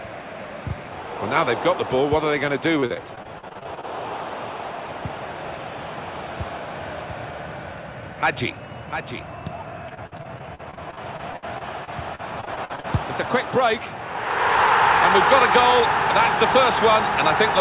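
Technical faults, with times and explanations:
2.80–3.85 s, repeated packet loss (robotic sound): gaps up to 40 ms recur rapidly, each patched by extending prior sound, leaving about a quarter concealed and a choppy texture.
5.88–13.61 s, doubled audio track: a second full-band copy trails by roughly 0.7 s, about 10 dB quieter, starting and stopping abruptly, likely from a slower duplicate capture path.
9.89–12.85 s, repeated packet loss (robotic sound): dense dropouts up to 59 ms, roughly a fifth of the span filled by repetition, giving choppy sound within the 4 kHz-limited band.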